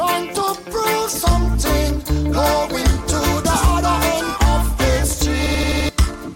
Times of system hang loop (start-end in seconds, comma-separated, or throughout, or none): 5.46-5.89